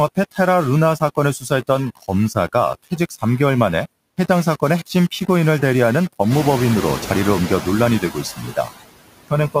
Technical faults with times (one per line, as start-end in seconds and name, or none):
0.00-9.60 low bit depth without dither
0.00-9.60 noise suppressor artifacts
0.15-0.39 speech cut by the noise suppressor
1.39-1.69 speech cut by the noise suppressor
2.75-3.23 speech cut by the noise suppressor
6.30-7.43 noise suppressor catching up
8.00-8.69 speech cut by the noise suppressor